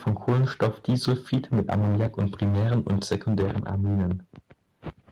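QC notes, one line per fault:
0.06–4.13 s, microphone overload: The louder syllables through almost the whole clip carry a harsh, crackling grit, and the peaks sound flattened rather than rounded. The input is likely set far too hot, driving the signal about 13 dB past the converter's ceiling, so the tops of the waveform are sliced off. Roughly a tenth of the audio sits pinned at that limit.
0.08 s and 3.13 s, microphone volume stepped down: At each of these moments the speech and the background behind it drop together in a single abrupt step, about 2 dB at 0.08 s and about 3 dB at 3.13 s. The likely cause is the call software reacting to the clipped, overloaded input by cutting the device's input volume in one step rather than fading it. Because both cuts are small, the overload distortion keeps sounding after them.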